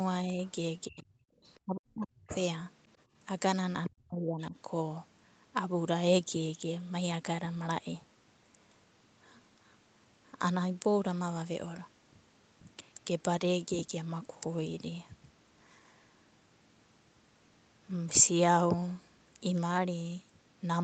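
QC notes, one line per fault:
0.24–0.39 s, 0.88–1.10 s, 1.64–2.34 s, 3.88–4.55 s: speech suppressed in double talk. The speech dips by about 5 dB in the first event. The later three drop roughly 30 to 40 dB, almost cutting out. The likely cause is an echo canceller that could not separate the talker from the far side and turned both down.
0.45–0.52 s, 1.45–1.60 s, 2.27–2.42 s, 3.84–3.89 s: other side's voice leaking through. Short scraps of a second voice sit under the speech. They start very faint, at about 35 dB below, and grow to about 15 dB below by the last scrap. This is likely loudspeaker echo that the canceller left in.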